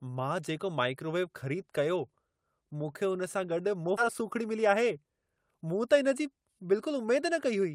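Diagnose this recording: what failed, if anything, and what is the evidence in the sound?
The fault sits in the network path at the jitter buffer. A skip ahead occurs between 3.97 and 3.99 s. The speech jumps forward with no gap and nothing filled in, and the two sides butt together almost directly. Roughly a second of audio is gone. That stretch was discarded, either lost in transit or dropped when the buffer overflowed with later packets already queued, so playback resumed at the newer audio.

A jitter buffer speed-up follows from 4.21 to 5.59 s. The speech runs at about 111 percent of normal rate while the pitch stays unchanged, so it sounds hurried rather than higher. The buffer was holding more audio than its target. To cut that excess delay, the receiver removed short pitch-period-length pieces repeatedly across the stretch, trimming roughly 150 ms in total.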